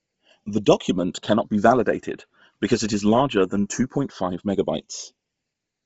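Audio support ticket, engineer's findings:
Slow flanging sweep over the whole clip when summed to mono. Channels drifting apart: two device clocks around 150 ppm apart, inter-channel delay creeping to about half a millisecond, dragging comb-filter notches slowly through the spectrum.

Breathy, grainy edge on the speech throughout; nothing above 7.7 kHz. Likely Bluetooth LC3 compression, heavily damaged: upper bands zeroed and refilled with noise, which fits low-bitrate operation around 24 kbps with 7.5 ms frames.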